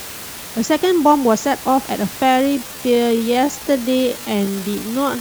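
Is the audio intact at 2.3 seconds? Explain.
No. From 2.21 s to the end, this is a time-stretched section. The speech slows abruptly to about 0.6 times its pace while the pitch stays put. It drags, likely because software repeated short pieces to lengthen it.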